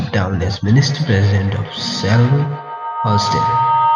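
Feedback howl runs from 0.68 s to the end of this speech clip: a loop between microphone and loudspeaker gains level on each trip, so repeats every 150 ms or so build into a tone near 1 kHz, peaking at about 1 dB below the speech.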